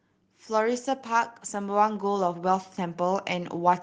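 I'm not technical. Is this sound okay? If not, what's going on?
No. From about 0.47 s to the end you can hear automatic gain rising: the recording's level control decided things were too quiet and kept turning itself up, so the voice and the background swell louder together.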